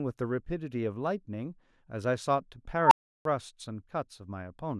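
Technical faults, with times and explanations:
2.82–3.25 s, unstable filter: a recursive filter runs away, and a squeal near 1 kHz swells to clipping within about 92 ms. The overflowing values then cut to 0.34 s of silence. The spectrogram shows a brightening horizontal line, and the waveform a flat-topped ramp, then nothing.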